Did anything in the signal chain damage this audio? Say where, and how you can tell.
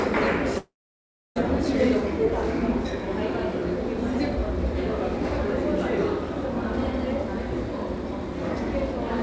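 Yes, at the network stage. From 0.58 to 1.38 s the sound stops. A brief fading buzz continues it, then about 0.66 s of silence follows. Audio resumes with roughly 0.78 s lost. This is likely a long network dropout that the receiver could not conceal.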